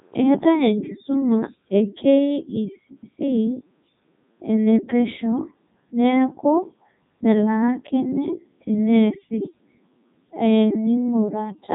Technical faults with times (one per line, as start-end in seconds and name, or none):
0.00-11.74 Codec 2 vocoder